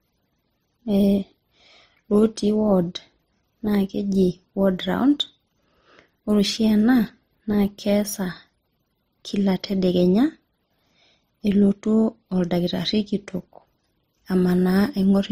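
Throughout the speech, the audio was likely encoded as MP3 and then re-encoded as Opus, at rates that suggest about 41 and 32 kbit/s. This transcoding between lossy codecs stacks smeared MP3 artefacts under Opus's own graininess, with nothing above 16.1 kHz.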